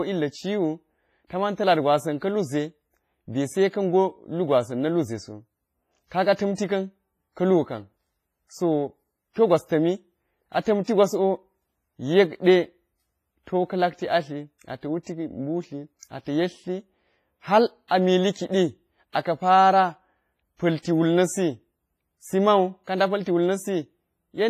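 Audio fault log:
throughout, WMA compression: the speech sounds ringing and washy, with a hiss that swells and fades with the signal and nothing above 15.4 kHz. Heavy damage of this kind likely comes from an early WMA encoder at about 24 kbps, where long transform blocks smear quantisation noise and weak spectral lines drop out. Unlike broadband background noise, the hiss disappears in pauses.
6.55 to 6.58 s, 10.84 to 10.88 s, 17.88 to 17.91 s (just before "a mili kiɗi aka̱"), 19.12 to 19.15 s (after "hal a mili kiɗi", before "aka̱ para"), 20.82 to 20.85 s (before "wul na̱sisi mau ka"), pre-echo: a brief hiss, 24 to 37 ms long, comes just ahead of each sharp onset, which then sounds softened. The attack sits late in a transform block, so noise scaled for the loud part also fills the quiet moment before it. It differs from a click or dropout because it comes before the attack, never after.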